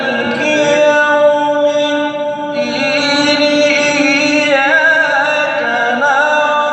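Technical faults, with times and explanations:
Careful listening turned up nothing in the sound that stood out as a technical problem.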